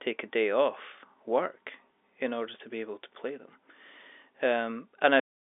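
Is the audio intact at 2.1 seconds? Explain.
Yes, the audio is intact at 2.1 seconds, with the speech carried cleanly over the G.711 telephone coding, its narrow band of about 300 Hz to 3.6 kHz and no content above about 3.8 kHz.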